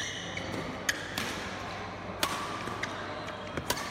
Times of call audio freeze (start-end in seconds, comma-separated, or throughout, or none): none